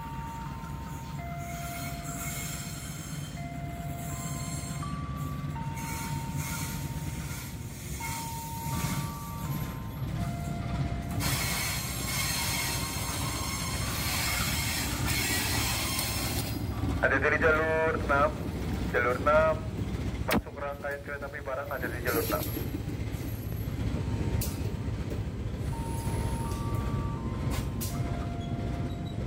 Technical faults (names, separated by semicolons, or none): none